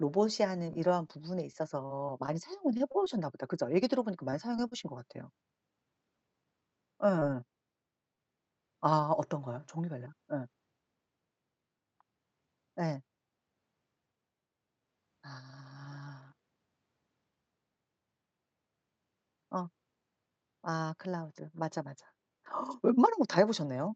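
It's a speech recording that's come through a call, and it runs into repeated packet loss (the robotic sound) twice early on. From 0.73 to 3.22 s there are ten separate dropouts, the longest 44 ms. The receiver keeps papering over each hole by stretching out the last bit of sound, and since the holes come thick and fast you get a choppy, mechanical texture. A shorter burst hits from 4.30 to 4.73 s with four gaps, the longest 27 ms, and about 17 percent of that stretch is filled-in rather than real audio. After that there are two isolated bits of short concealed packet loss, at 7.19 to 7.23 s and 8.15 to 8.19 s. Each is a tiny hole, about 20 ms of sound that arrived too late, patched by continuing the preceding sound and then blending back in. You hear a quick smear or wobble rather than a proper dropout. All of this sits on a call path with an 8 kHz top end, which fits Opus at around 64 kbps.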